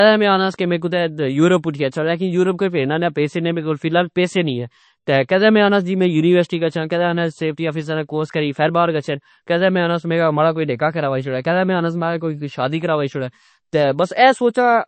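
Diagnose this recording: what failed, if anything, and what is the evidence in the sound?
The codec stage shows plainly audible damage across the whole speech clip, likely MP3 compression. Nothing sounds above 8.3 kHz, and sibilants have a watery, swirling quality. A spectrogram shows a hard ceiling and flickering holes where weak frequency lines drop out between frames, which fits a bitrate in the low thirties of kbps.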